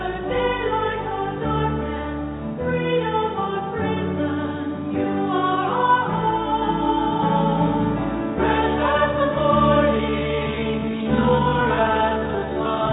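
From 9.93 s to the end at 12.93 s, the pace abruptly slows to 0.65 times while the pitch holds, leaving the sound dragging within its 4 kHz band. This is likely a time-stretched section, lengthened by repeating short pieces instead of lowering pitch.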